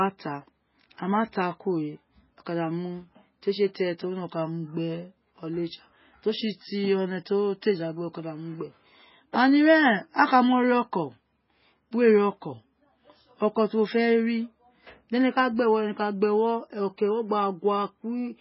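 From start to finish the speech sounds watery and swirling, with sibilants turning into metallic chirps and consonant onsets smeared rather than crisp. Nothing is heard above about 5.6 kHz, so the top end is cut off flat. The likely cause is heavy MP3 compression at a very low bitrate, around 16 kbps. Starved of bits, the encoder chops the treble at a fixed point and drops weaker frequency lines that flicker in and out frame by frame.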